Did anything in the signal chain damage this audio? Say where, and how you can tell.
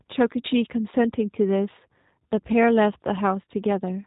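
Yes. The damage comes from the codec stage and runs through the whole speech clip. This is G.729 codec coding. Nothing reaches above 3.8 kHz, so the top end is cut off throughout. The speech sounds rough and synthetic, and the damage is plainly audible. The codec rebuilds each 10 ms frame from a vocal tract filter, a pitch predictor and a few pulses. The fine detail of the waveform is lost, and the result fits an 8 kbit/s voice codec.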